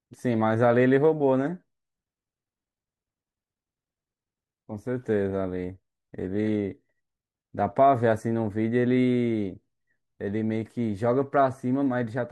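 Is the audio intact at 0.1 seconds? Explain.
Yes, the speech is intact at 0.1 seconds, with no fault at that moment.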